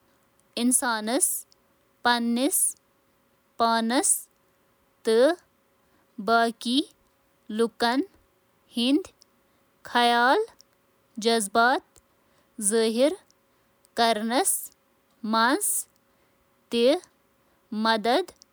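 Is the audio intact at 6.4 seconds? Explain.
Yes, the speech at 6.4 seconds is intact, with no dropout, click, distortion or other fault at that moment.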